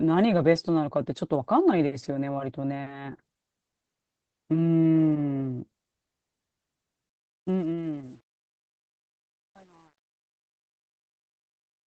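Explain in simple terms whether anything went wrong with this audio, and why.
Opus voice compression squeezed the whole recording into very little data, so the speech sounds plainly muffled, hoarse and slightly robotic from start to finish. Truncation distortion on a fade happened because the fade-out, starting around 7 s, was done with too little precision. From 7.09 s the tail turns gritty, and from 7.99 s to the end it is at its worst.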